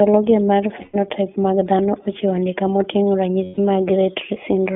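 iLBC codec coding runs through the whole speech clip: each 20 ms frame is coded on its own, and the band stops near 3.5 kHz, giving plainly audible rough, synthetic coloration consistent with 15.2 kbps. Lost iLBC frames occur from 0.82 to 0.96 s (120 ms) and from 3.44 to 3.60 s (140 ms), which fit runs of six and seven 20 ms frames. The decoder repeats the last pitch cycle blended with noise, so each gap sounds like a held, faintly buzzy vowel before the voice returns almost immediately.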